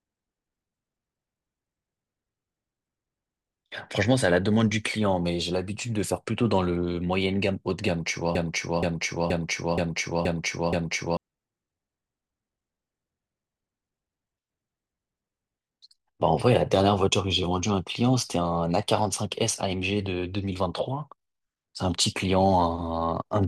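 A broken-record loop runs from 8.35 s to 11.17 s. A 475 ms fragment of the speech repeats six times back to back, identical on every pass. The player or stream likely stalled and kept resending the last chunk it held, so the speech due there is lost.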